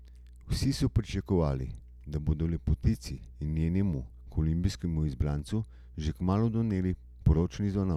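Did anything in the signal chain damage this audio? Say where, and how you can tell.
Yes. Mains hum runs under the speech from start to finish, a steady 60 Hz tone with low harmonics, roughly 20 dB below the speech level. This points to the analogue wiring stage, where a ground loop or nearby transformer coupled the power line into the signal.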